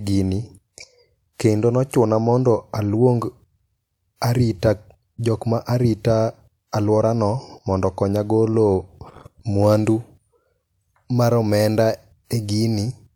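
No technical faults can be heard in the recording.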